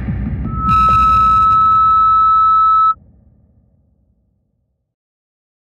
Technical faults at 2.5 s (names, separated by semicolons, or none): loudspeaker feedback squeal